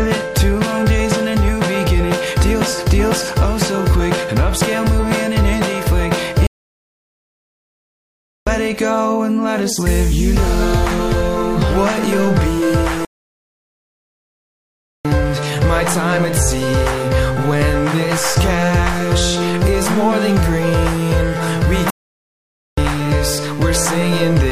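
At 6.47 s the sound cuts out for 2 s, returning at 8.47 s; the same happens from 13.05 to 15.05 s, and a shorter gap runs from 21.90 to 22.78 s, about 0.87 s. Each is a playback stall, likely the player running dry of data or its thread being held up. The waveform drops to a flat line and the spectrogram shows a blank vertical band edge to edge.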